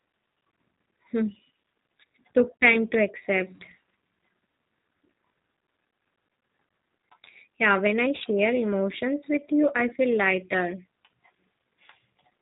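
A speech recording passed through a G.729 codec at 8 kbit/s, which rebuilds each 10 ms frame from a vocal tract filter, a pitch predictor and a few pulses rather than the waveform itself. Nothing above 4 kHz survives, so the speech sounds dull and boxed-in, and the codec damage is plainly audible as a rough, slightly synthetic texture. The same link also shows VoIP packet loss concealed by the speech codec, where the decoder fills lost audio by extrapolating from its last pitch and filter at falling gain. A 40 ms gap at 2.56 to 2.60 s, which fits two lost 20 ms packets, is smeared into a brief buzzy tone or coloured noise that fades just before "time to accept". At about 8.18 s, between "when I" and "emotions with you I", a shorter 20 ms gap, pointing to a single lost packet, produces the same stretched, weakened sound, and the following syllables stay weak or distorted as the decoder recovers.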